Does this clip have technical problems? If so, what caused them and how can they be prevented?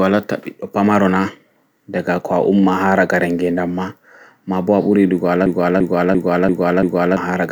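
Yes, there's a system hang loop from 5.46 to 7.17 s. The machine or its audio driver stalled while the sound hardware kept replaying its ring buffer, so one 341 ms chunk of speech repeats five times at about 2.9 Hz, giving that skipping-record repetition. The loop length fits a 16384-sample buffer, and around a second and a half of real audio is gone. To prevent it, keep the audio thread off overloaded systems and use drivers with watchdogs that mute on underrun.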